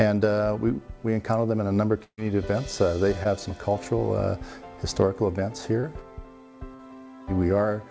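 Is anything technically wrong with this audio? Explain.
Yes. There is a burst of packet loss and three short concealed packet losses, heard through a call codec path whose spectrum stops at 8 kHz, which fits G.722.

Burst of packet loss, 2.04–2.19 s: late or lost packets left a gap. The receiver extended the last sound for about 135 ms, fading it, then about 80 ms of silence. The audio resumes with 140 ms skipped. On the waveform, a decaying tail runs into a flat stretch; on the spectrogram, smeared repeated texture ends in a dark band.

Short concealed packet loss, at 3.23–3.27 s, 5.81–5.85 s and 6.75–6.81 s: brief holes were patched by continuing the preceding sound (12, 22 and 40 ms), then blending back. These drop 20, 20 and 40 ms of audio, heard as a quick smear or wobble. They show as short blurred vertical strips on the spectrogram.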